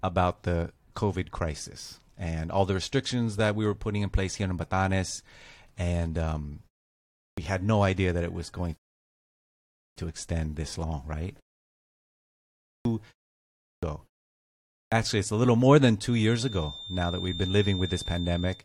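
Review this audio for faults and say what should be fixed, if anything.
Clipped start after a pause occurs five times, at 6.91, 11.76, 12.44, 13.39 and 14.46 s. Each follows a short silence of 0.3 to 0.46 s, and each time roughly 0.42 to 0.46 s of onset is swallowed. The output device drops into a low-power or unlocked state during the gap and needs that long to come back. Speech therefore begins abruptly, missing its first sounds, as after "extend this long right" and before "actually it's a little". To prevent it, keep the output stream open, or disable device power-saving, so the path stays awake through brief pauses.

A rebuffering stall runs from 8.77 to 9.97 s, between "that it was going" and "to extend this long". Playback ran dry of downloaded audio, fell silent, and resumed exactly where it stopped. No content is lost, but about 1.2 s of dead air is added mid-phrase, which breaks the rhythm of the sentence. 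To prevent it, use a larger playback buffer or an adaptive bitrate so downloads keep ahead of playback.

A feedback whistle sits under the speech from 16.03 s to the end of the clip. It is a thin, steady tone near 3.6 kHz, about 15 dB below the speech, and it swells and fades slowly in level. This most likely comes from a loudspeaker-to-microphone loop held just short of runaway, so one frequency keeps ringing without building up. To prevent it, use headphones, lower the monitor gain, or apply acoustic echo cancellation or a notch at that frequency.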